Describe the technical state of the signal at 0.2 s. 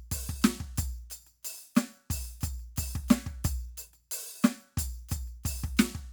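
At 0.2 s the music plays through intact, with no audible fault at that moment.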